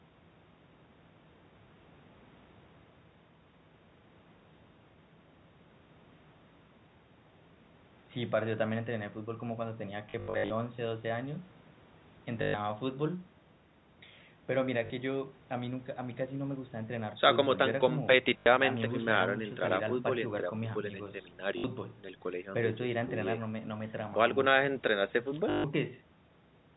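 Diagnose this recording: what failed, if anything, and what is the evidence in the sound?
The network stage failed, with packet loss and the last packet repeated. Robotic stutters occur at 10.1 to 10.5 s, 12.42, 14.86, 18.38, 21.58 and 25.5 s. The receiver replays the last packet over each gap. Runs buzz near 50 Hz, which fits 20 ms packets.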